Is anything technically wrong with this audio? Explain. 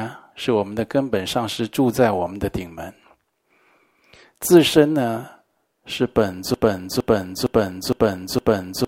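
Yes. From about 6.54 s to the end of this speech clip, a broken-record loop takes over. A fragment of about 0.46 s repeats exactly, back to back, five times. There is no gap or fade between the repeats, so the sound stutters in a rigid, mechanical rhythm. The likely cause is a stall in the player, encoder or stream, which kept resending the last piece it held. Whatever should have followed is lost.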